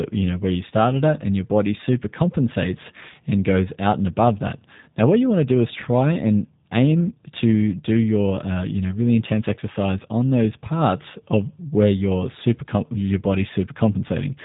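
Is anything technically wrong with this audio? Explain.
Yes. Throughout, the speech sounds thin, slightly rough and synthetic, with nothing above 3.8 kHz, which is plainly audible G.729 codec damage. Each 10 ms frame is rebuilt from a vocal tract filter, a pitch predictor and a few pulses, which fits an 8 kbit/s stream.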